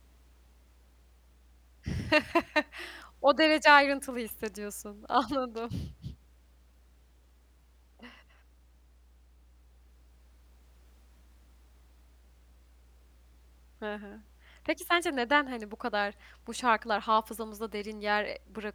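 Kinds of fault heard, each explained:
Mains hum: a steady low tone at 60 Hz sits under the speech for the whole clip, quiet but constant, roughly 30 dB below the speech. It comes from the power line leaking into the signal through a ground loop or a nearby transformer.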